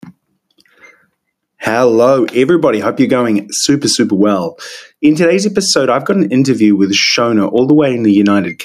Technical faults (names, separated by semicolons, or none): gain pumping